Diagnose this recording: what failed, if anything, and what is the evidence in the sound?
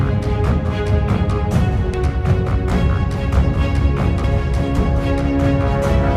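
The failure sits at the codec stage, where damaged data in a compressed stream reached the decoder. Two brief glitches stand out: one at 1.94 s and a much longer one from 4.24 to 4.27 s. Corrupted bytes made the decoder misread those frames, lose sync and hunt for the next valid header. At each point the waveform shows an abrupt discontinuity.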